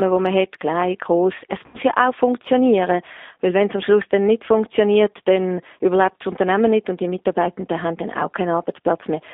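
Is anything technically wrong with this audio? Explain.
Yes. The speech has been through the G.729 codec from start to finish, and there is a short burst of VoIP packet loss concealed by the speech codec.

G.729 codec: Across the whole clip the sound sits in a telephone band of roughly 250 Hz to 3.7 kHz, with nothing above. The damage is plainly audible: a rough, slightly synthetic texture that fits an 8 kbit/s codec rebuilding each frame from a vocal tract filter, a pitch predictor and a few pulses. Plain band-limiting would leave the voice smooth and only muffled. Here the texture itself is grainy and artificial.

VoIP packet loss concealed by the speech codec: From about 1.66 to 1.77 s, just before "ja auch funktionieren", roughly 80 ms of audio is missing. Rather than a silent gap or a click, the decoder fills it by extending its last pitch and filter state. That produces a brief, smeared buzzy tone or coloured noise that fades as the gain is lowered frame by frame. 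A plain dropout would cut to silence. Here the gap is papered over, and the following speech sounds weak or distorted for a moment because each frame builds on the corrupted one before it.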